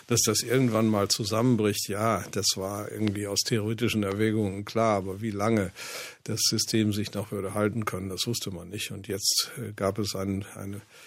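A sudden voltage step, most likely from a plug, switch, static discharge or driver glitch, twice gets added to the signal, and the following circuitry shapes it into a brief pulse. The result is a loud pop from 3.08 to 3.10 s, peaking roughly 15 dB above the surrounding audio, then a second, softer pop from 4.12 to 4.14 s, around 10 dB above it. Each is a single sharp click-thump sitting on top of the sound, which continues underneath.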